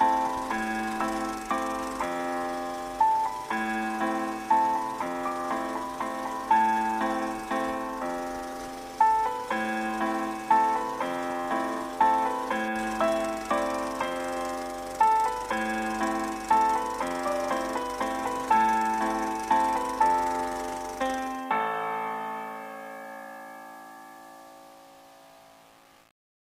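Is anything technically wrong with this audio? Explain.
No, nothing is technically wrong.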